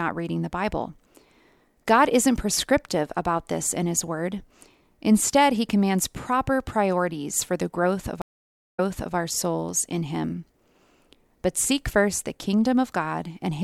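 At 8.22 s, after "for the growth of", the connection breaks and the player reconnects with a fresh decoder, a stream reconnect. The speech drops into 0.54 s of silence, then resumes 0.39 s earlier, repeating a short stretch before "our souls in" at 9.15 s.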